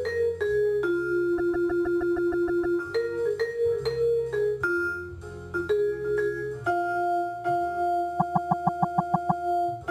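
Repeated frames occur from 1.37 to 2.78 s and again from 8.19 to 9.45 s. In each case a short run of compressed audio was delivered more than once, so the decoder plays the same 156.7 ms block over and over, which fits a run of about six frames. This is heard as a mechanical stutter: the block plays nine extra times in the first event and eight in the second, stretching the audio by about 1.41 s and 1.25 s.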